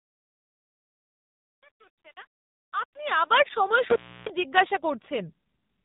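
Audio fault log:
Throughout: AMR narrowband mobile codec. Nothing passes above 3.8 kHz, and the heavy buzzy, synthetic quality of the speech fits a low rate near 6.7 kbps.
3.90–4.30 s: intermittent contact. A loose connection opens for about 308 ms, cutting the speech to faint hiss with crackle at both edges.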